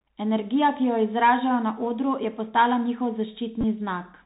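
A speech recording carries the Bluetooth CVSD headset codec throughout. Nothing above 4 kHz survives, s sounds turn scratchy, and a granular hiss sits under the speech, all consistent with a 64 kbps one-bit delta stream. That hiss and the overload roughness on loud, bright sounds separate it from simple telephone band-limiting, which stays clean. From 3.61 to 3.64 s there is a Bluetooth headset packet repeated event. About 22.5 ms of audio is lost across 30 ms, with the longest run roughly 15 ms, and the decoder replays the previous packet. Instead of a gap of silence, this produces a short buzz near 267 Hz from the 3.75 ms repeat cycle, which is what distinguishes it from an ordinary dropout.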